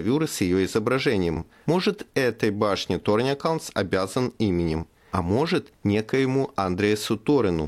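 No technical faults can be heard anywhere in this speech recording. At no point does the signal break off, stall or change character.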